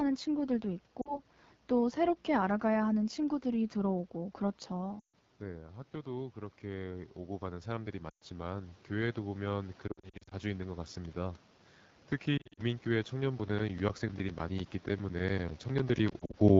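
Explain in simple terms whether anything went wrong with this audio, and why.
The phone call used the AMR wideband (HD Voice) codec at one of its lowest quality settings, so the speech sounds rough and raspy throughout.

Radio errors caused lost AMR speech frames. The receiver then filled each gap by stretching out the last good sound, which fades the speech toward near silence before it comes back weak or rough. This happens at 1.01 s, just before "또 새롭게 알아가야 하는", and again at 4.99 s, 8.10 s, from 9.87 to 10.34 s, from 12.37 to 12.62 s, and from 16.09 to 16.37 s.

The automatic gain rising kicks in after "새롭게 알아가야 하는 친구들이". The system decided the input was too quiet and slowly turned it up between 4.1 and 11.2 s, so the speech and background swell together.

Periodic USB or driver dropouts come from a background task interrupting the audio path every tenth of a second, from 13.4 to 16.5 s. 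Each interruption leaves a tiny silent gap, heard as roughly thirty regular ticks.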